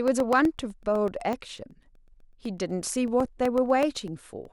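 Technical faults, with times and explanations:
0.08 to 4.45 s: periodic USB or driver dropouts. Every 0.125 s, about a millisecond of the speech goes missing and is replaced by silence as something periodically stalls the USB bus or audio driver, producing about forty evenly spaced ticks, eight per second, audible wherever sound is present.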